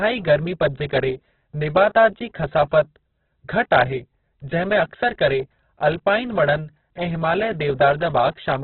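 Speech, heavily damaged by what is likely Opus compression throughout. Nothing reaches above 4.5 kHz, so the sound is narrowband and dull. The damage is heavy. Tones come out rough, grainy and noisy rather than swirly. That fits the codec's music mode starved of bits. It keeps each band's energy but fills thin bands with noise or folded copies of lower ones. The narrowing and grit point to a very low bitrate, near 8 kbps.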